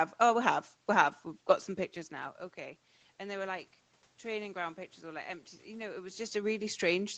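No faults present: the bandlimiting near 8 kHz from the call path, the room noise, and the level shifts around 2 s and 6 s as the talker moves are all expected behaviour.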